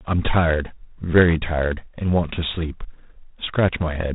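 Speech with G.726 ADPCM coding throughout: nothing above 3.8 kHz, and a harsh, rasping hiss tracking speech level, which fits the 24 kbit/s mode.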